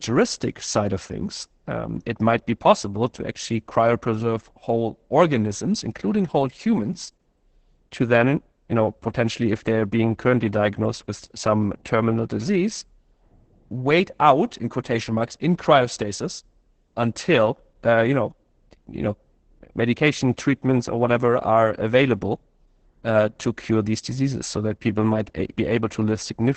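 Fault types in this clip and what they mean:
Opus voice compression: muffled, hoarse, slightly robotic speech with nothing above about 8.7 kHz, from heavy SILK coding at 10 kbps in wideband mode.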